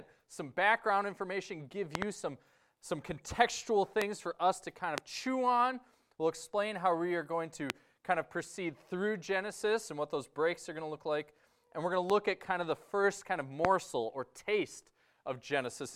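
Loud pops strike at 1.95 s, a double pop ending by 2.04 s, then singly at 4.02, 4.98, 7.70, 12.10 and 13.65 s. Each is a sharp thump well above the sound, which carries on beneath. A sudden voltage pulse, likely static or a switch, caused them.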